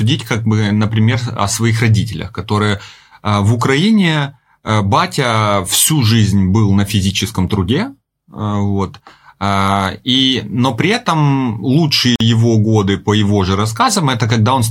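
A speech clip with a gap at a join of encoded pieces from 12.16 to 12.20 s, right after "но при этом" and before "его годы по его". A gap of about 47 ms opens in the sound, then it resumes where it stopped. Two separately encoded pieces were spliced without trimming the encoder's start delay and last-frame padding. On a waveform it is a flat stretch whose edges are smeared by the codec. On a spectrogram it is a narrow, empty vertical band across all frequencies.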